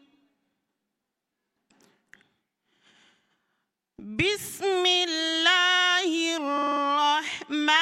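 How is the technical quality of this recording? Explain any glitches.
The recording has one glitch. From 6.57 to 6.81 s, a short 48 ms slice stutters, replaying five extra times. These are repeated frames: a block of compressed audio, which fits a pair of codec frames, was written more than once, so the decoder replayed it, adding 240 ms.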